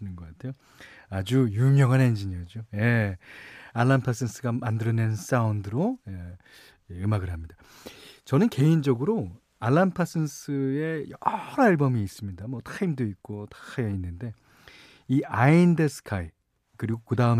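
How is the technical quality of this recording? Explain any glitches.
No glitches or technical faults can be heard anywhere.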